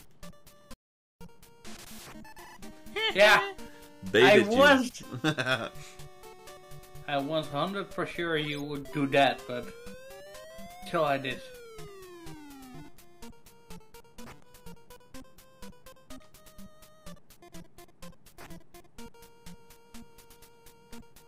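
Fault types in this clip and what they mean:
Audio dropout to silence: the sound cuts off mid-flow at 0.74 s and resumes at 1.21 s, leaving 0.47 s of silence, likely from a lost input while recording continued. Unlike a natural pause or gating, no room tone survives, and the content is missing.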